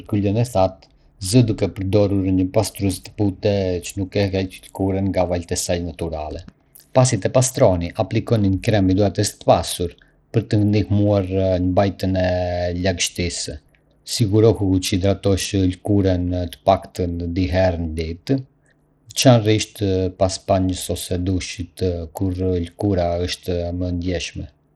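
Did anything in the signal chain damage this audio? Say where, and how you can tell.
Yes: Bluetooth SBC compression damage runs through the whole speech clip, at the codec stage. The treble is thin and flickers in and out, and a gritty, aliased roughness clings to the sound. The likely cause is an SBC link with a small bit pool, which fits a low bitrate of around 80 kbps. SBC splits the signal into a few wide sub-bands without a hearing model, so the weak upper bands starve of bits while the rest are coarsely quantised.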